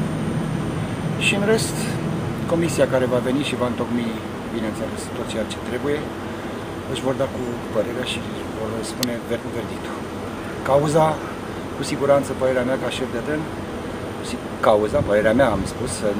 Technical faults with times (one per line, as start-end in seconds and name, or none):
none